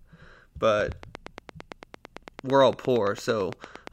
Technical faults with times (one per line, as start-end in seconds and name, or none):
0.81-3.88 train of clicks